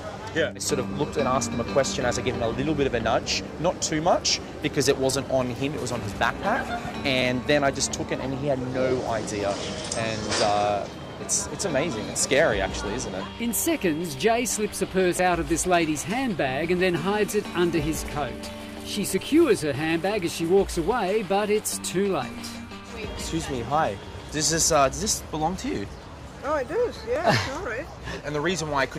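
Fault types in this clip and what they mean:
Overlap between stream segments: two adjacent chunks of the stream claim the same stretch of time, so the player trims the overlap and a sliver of real audio, about 6 ms here, just disappears, leaving a jump in the waveform. You hear it as a small click or skip at 3.24, 15.19 and 27.16 s, roughly 12 s apart, which lines up with every third boundary of 4-second segments.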